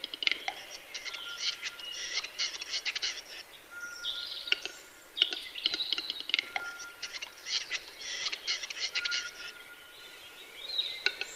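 A short concealed packet loss occurs between 8.23 and 8.27 s: about 20 ms of audio failed to arrive at the decoder in time, and the receiver synthesised a 20 ms fill by extending the preceding sound before crossfading back into the real signal, leaving a brief smear.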